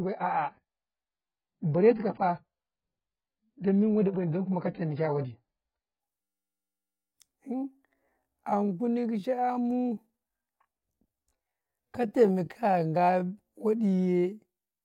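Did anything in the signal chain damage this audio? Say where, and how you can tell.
Yes. At the network and playback stage, an adaptive stream starting at a low bitrate: from 0.0 to 6.0 s the treble is missing and codec artefacts are heavy. This fits a very low AAC rendition of around 12 kbit/s. At 6.0 s the spectrogram's upper band fills in abruptly, with no gap, as the player steps up to a much better one.

At the driver or buffer stage, a system hang loop runs from 6.22 to 7.12 s. A 10 ms slice repeats exactly, giving a steady 100 Hz buzz. The waveform shows identical periodic cycles, and the spectrogram shows a comb of harmonics at 100 Hz spacing. Essentially no audio is lost.

From 7.49 s to the end there is a time-stretched section, most likely from processing before playback. The speech runs at about 0.65 times its original pace while the pitch holds, so it drags. On a spectrogram, harmonic spacing stays unchanged while syllables lengthen, with repeated short segments visible.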